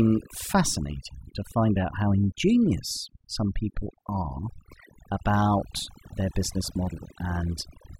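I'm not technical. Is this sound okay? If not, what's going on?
No, not quite. This speech has overdone noise removal from start to finish. A cleanup tool was set too strong, so the background drops and breaks up into twinkling specks. Those twinkling specks separate it from ordinary muffling.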